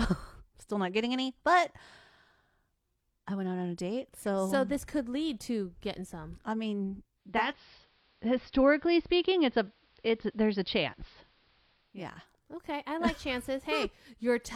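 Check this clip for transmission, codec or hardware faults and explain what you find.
One fault affects the speech: the radio falls back from digital to analogue reception.

Digital radio blending to analogue, from 7.15 to 12.09 s. The receiver lost its digital stream and cross-faded over about 0.42 s to the station's analogue signal, then blended back. The treble drops, which fits an AM broadcast. Hiss appears roughly 35 dB below the speech, and the level shifts by about 1 dB.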